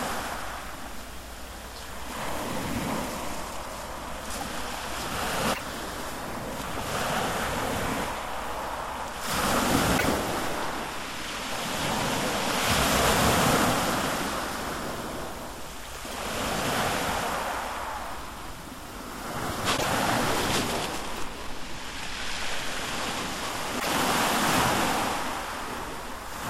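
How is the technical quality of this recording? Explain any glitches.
Five short glitches come from damaged data in a compressed stream, at 5.50–5.61, 9.94–10.05, 16.10–16.14, 19.74–19.85 and 23.76–23.87 s. Each time, corrupted bytes made the decoder misread frames and lose sync. It then hunted for the next valid frame header. Each one is heard as a brief chirp or blip.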